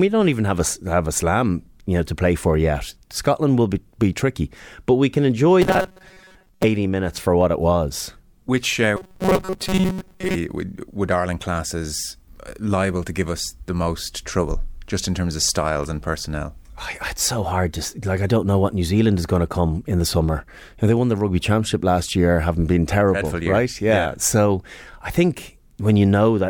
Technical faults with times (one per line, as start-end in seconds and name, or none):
5.62-6.64 robotic sound from repeated short buffers
8.97-10.35 robotic sound from repeated short buffers